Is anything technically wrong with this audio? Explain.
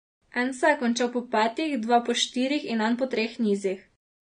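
Yes. The whole clip shows AAC compression damage, plainly audible in the speech. The spectrum stops dead at about 9.7 kHz, which fits a low-bitrate stream around 32 kbps. The codec, likely AAC-LC, quantises each frame's frequency lines coarsely against a hearing model, so high content is discarded and what remains is smeared, making the speech dull and warbly. A spectrogram shows a flat ceiling near 9.7 kHz with patchy, blocky gaps below it.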